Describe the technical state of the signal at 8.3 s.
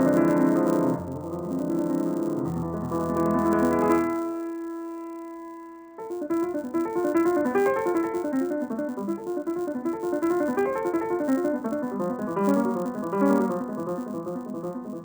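At 8.3 s the resampler restarted on every block, as it does throughout. Each 10 ms block was converted from 16 kHz to 48 kHz with no memory of its neighbours. Every block edge carries a small error. Together they form a 100 Hz buzz that rides on the signal.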